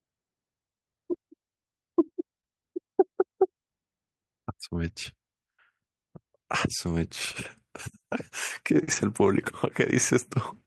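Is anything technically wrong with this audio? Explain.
Yes, two overlapping packet faults near the end, in speech carried over an Opus call path whose top end stops around 12 kHz.

From 8.83 to 8.89 s there is short concealed packet loss. About 40 ms never arrived, and the decoder extended the preceding sound to fill it. This gives a brief smear rather than rough noise.

From 8.87 to 8.97 s a lost packet is rebuilt from error correction. About 60 ms, three separate packets, was played from low-bitrate backup copies. There is no gap, but the sound is grainier and noisier than the surrounding audio.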